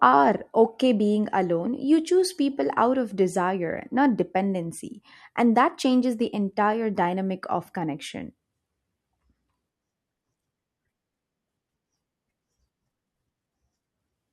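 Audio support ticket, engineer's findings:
No audible faults found on listening; nothing to attribute to any component.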